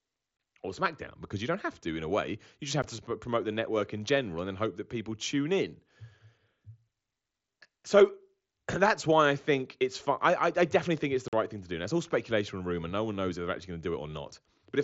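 Unconcealed Bluetooth headset packet loss hits at 0.37 to 0.39 s (about 22 ms), at 2.82 s just before "to promote the network", and at 11.28 to 11.33 s (45 ms) between "I definitely think it's" and "right thing to do". Short runs of packets between headset and phone never arrived, and silence or an idle pattern filled their place, so each gap fits a few lost 7.5 ms packets. The result is hard-edged dropouts, heard through the light graininess of the mSBC wideband link.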